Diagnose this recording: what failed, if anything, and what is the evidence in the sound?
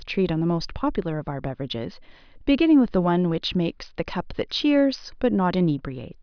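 Nothing in the signal chain has failed: the speech arrives intact, with steady level and continuous signal throughout and nothing audible that would point to a problem at any stage.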